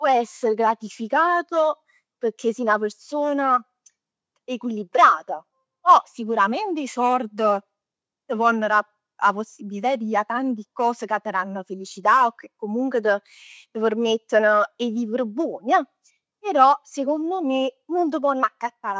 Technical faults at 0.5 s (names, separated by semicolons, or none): none